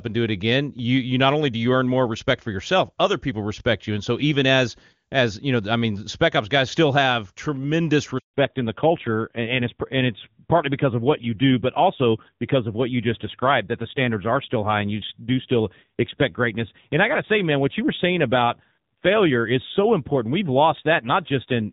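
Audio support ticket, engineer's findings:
Handover gap at 8.18–8.34 s: sound cuts off abruptly, then 160 ms of silence. Network handover; no speech frames delivered during the switch, so that stretch of audio is lost rather than concealed.

Fallback to narrowband from 8.34 s to end: clear wideband sound before the gap, consistent with HD Voice at its top rate. Afterwards nothing above 4 kHz, duller and rougher timbre. Call renegotiated onto a narrowband codec, which fits a low AMR-NB rate.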